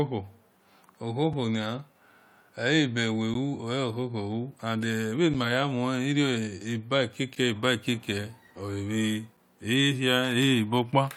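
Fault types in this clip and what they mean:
Gap between stream segments: at 1.33, 3.34, 5.34, 7.35 and 9.37 s, mismatched timestamps between 2 s segments leave hard-edged silent holes of 4 to 12 ms.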